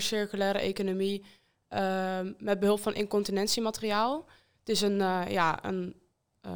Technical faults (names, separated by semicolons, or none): imaging from linear upsampling